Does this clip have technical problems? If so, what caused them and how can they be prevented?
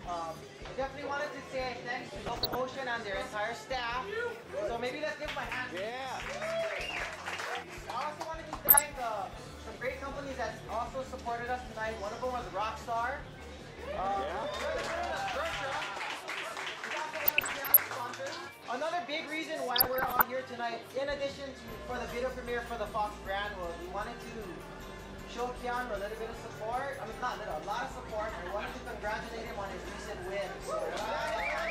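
Yes. DAB burbling occurs at 2.09 to 2.55 s, 8.54 to 8.82 s, 17.24 to 17.79 s and 19.76 to 20.22 s. Weak reception lets bit errors past error correction. Wrong samples then put short blips of noise in single sub-bands. A better-placed aerial or stronger signal prevents it.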